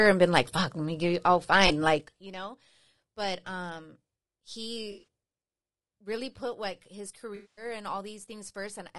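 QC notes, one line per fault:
Throughout: low-delay AAC compression, likely AAC-ELD at a low rate, fitting about 32 kbps. Its short frames resolve the speech harmonics coarsely, so the voice sounds rough and grainy, with noise filling between harmonics and a thin, synthetic-sounding top band. The damage is plainly audible.
1.67 s, 4.91–5.04 s, 7.35–7.65 s: AAC frame loss with concealment. The decoder rebuilt missing frames from the last good spectrum. At 1.67 s, about 20 ms is lost, which gives a brief smeared blip. The 4.91–5.04 s patch holds about 120 ms of scattered gaps, the longest near 70 ms, which gives a noisy, phasey stretch. The 7.35–7.65 s loss comes to about 220 ms, long enough to decay toward silence before the sound returns.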